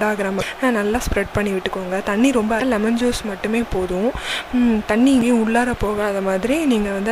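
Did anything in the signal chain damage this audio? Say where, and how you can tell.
Yes. The codec stage shows damaged data in a compressed stream: short glitches of about 44 ms at 0.38, 2.58 and 5.19 s. Corrupted bytes there make the decoder misread frames and lose sync until it locks onto the next valid frame header.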